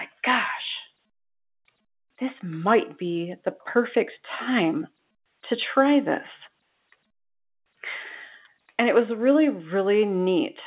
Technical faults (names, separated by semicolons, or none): none